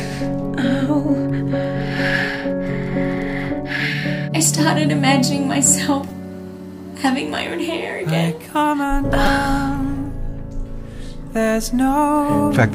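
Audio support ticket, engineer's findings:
Repeated buffer, two events. At 6.10 s, a brief buzz-like click. Same tiny slice heard three times in a row, hard joins. Length fits a 5 ms buffer. Playback device missed its deadline and replayed the last block. No audio dropped. At 9.26 s, same symptom, slightly longer. Slice heard four times, which points to the same 5 ms block size. Output buffer underrun again. Blocks that small register as a click, not a stutter.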